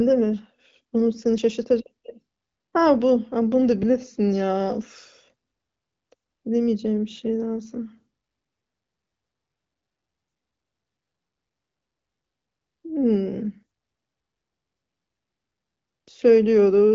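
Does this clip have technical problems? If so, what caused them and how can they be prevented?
Yes. The speech skips abruptly at 1.38 s and again at 3.83 s, each time losing roughly 50 ms, with the two sides joined directly rather than separated by silence. This is most likely audio missing between chunks: a recorder or processor working in blocks of about 2.5 s drops a short piece each time it closes one block and opens the next. Unlike network packet loss, which strikes irregularly and often leaves a muted gap or a smeared, concealed patch, these skips are seamless splices spaced at a regular block interval. The HD Voice wideband coding, audible as a top end that stops near 7.5 kHz, stays clear and plays no part in the skips. To prevent the skips, use overlapping or double-buffered chunk handling so the next block is already capturing before the current one closes.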